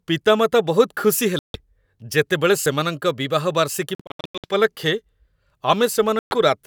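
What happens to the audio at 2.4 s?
Nothing goes wrong at 2.4 s; the speech runs through that moment without a dropout, click, distortion or any other audible fault.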